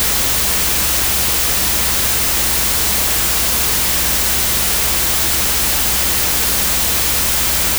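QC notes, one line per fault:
Throughout, wrong sample width: a thick hiss sits on top of everything, with the real sound buried underneath, slowed to half speed and dropped an octave. That fits 32-bit data being read as 16-bit. Each real sample gets split into two. One half keeps the top bits of the signal, and the other is just low-order bits that come out as noise. So there's double the sample count, alternating signal and junk.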